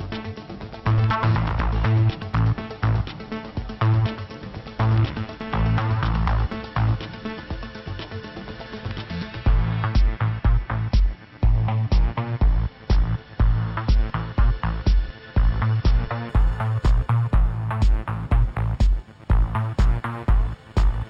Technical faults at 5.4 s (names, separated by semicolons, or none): none